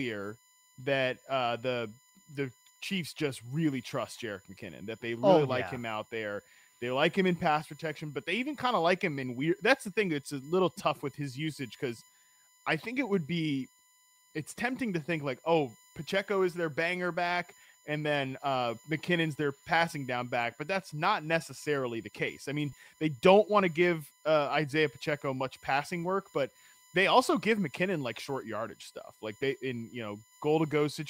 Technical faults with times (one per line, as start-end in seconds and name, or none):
0.00-31.09 USB whine
22.69-22.73 short concealed packet loss
26.03 lost packet rebuilt from error correction